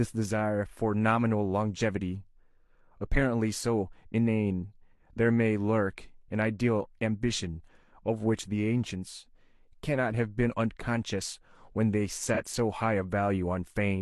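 An AAC frame went missing in transmission or storage near the end of this speech clip, between 12.34 and 12.41 s. That is a gap of about 43 ms, which fits the loss of a single frame. The decoder covered the hole with AAC frame loss concealment, rebuilding the missing stretch from the last good spectrum rather than leaving silence. Because the gap is short, the patch doesn't fade out. It comes across as a brief smeared, noisy or phasey blip before normal decoding resumes.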